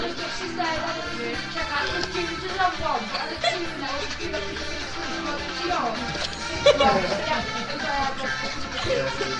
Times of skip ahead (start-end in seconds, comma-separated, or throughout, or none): none